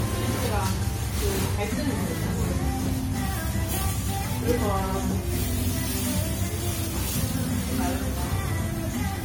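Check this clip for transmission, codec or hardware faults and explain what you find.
One codec fault runs through the whole recording. Throughout, the sound is swirly, smeared and hollow, with blurred attacks: generation loss, likely from about seven re-encodes, fitting a 64 kbit/s AAC-LC chain.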